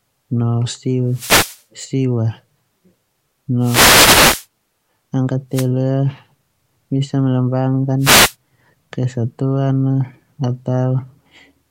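Short swishes of static break through the speech at 1.10–1.62 s, 3.60–4.46 s, 5.52–5.67 s and 8.00–8.35 s. These are wireless microphone noise hits: the FM radio link fades as reflected signals cancel, letting receiver noise surge over the voice.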